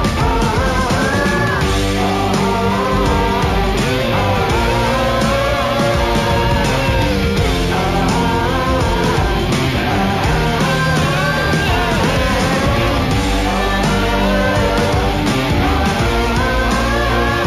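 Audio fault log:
throughout, imaging from linear upsampling: dulled top end with faint mirrored images at 8 kHz to 16 kHz, about 25 dB down, giving a light metallic shimmer, consistent with 16 kHz audio raised to 48 kHz.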